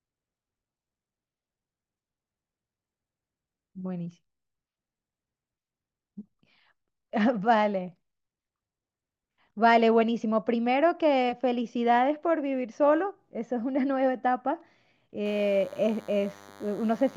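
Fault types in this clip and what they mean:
DECT cordless phone buzz: a nearby DECT handset's 100 Hz radio bursts get rectified into a thin, harmonic buzz, sitting well under the speech from 15.25 s to the end.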